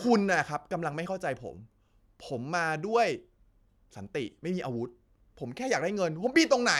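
No technical faults can be heard anywhere in this speech recording. There is nothing here to place on a timeline or trace to a cause.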